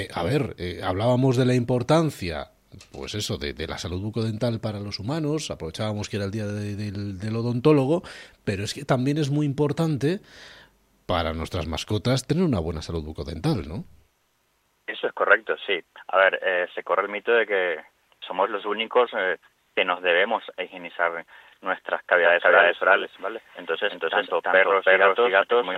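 At 22.24 s a doubled audio track kicks in abruptly and runs to the end: a second copy at about the same level, trailing by roughly 300 ms with no decay or room colour. That's likely a second, slower capture path mixed in.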